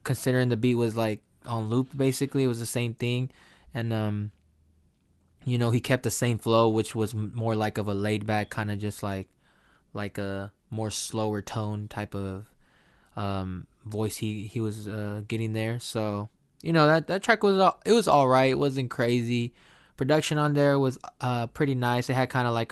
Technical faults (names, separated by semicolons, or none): none